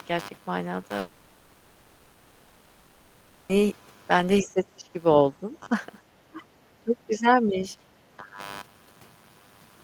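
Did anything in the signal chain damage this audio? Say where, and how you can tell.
Yes. Computer activity noise sits under the whole speech clip: a buzz pulsing at around 100 Hz, roughly 20 dB below the signal, coming and going with the machine's activity rather than the talking. That's analogue wiring, processor or mouse load moving the shared ground.

Between 0.99 and 3.51 s there's a long network dropout, 2.5 s of it, filled the whole way by a fading buzz continuing the last sound, then speech resumes with that stretch gone. It's likely packets simply stopped arriving and concealment papered over it.

Call processing shows speech suppressed in double talk at 4.41–4.89, 5.41–5.68, 6.27–6.49, 6.84–7.64 and 8.18–8.40 s. The voice dips in pieces, around 5 dB at the shallowest and up to about 20 dB, likely the echo canceller ducking while the far end talks.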